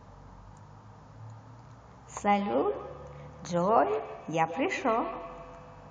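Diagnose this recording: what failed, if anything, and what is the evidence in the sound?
From 2.32 s to the end, speech returns at a steady interval of roughly 150 ms, peaking about 11 dB below the direct sound. It is feedback echo between two devices in call processing: one device's playback enters the other's microphone, beyond its echo canceller's reach.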